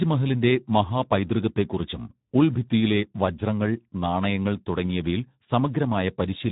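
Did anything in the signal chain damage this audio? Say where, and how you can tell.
Yes, at the codec stage: a Speex speech codec at a low setting, consistent with roughly 11 kbps, starves the excitation of bits throughout the clip. The speech sounds noisy and hoarse, and nothing is left above 3.8 kHz, giving a dull, band-limited tone.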